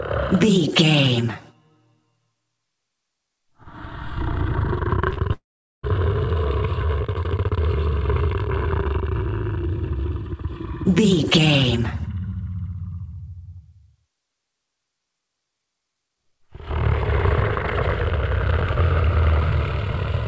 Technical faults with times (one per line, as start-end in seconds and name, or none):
5.14-5.19 short stall from a late packet
5.33-5.85 call audio freeze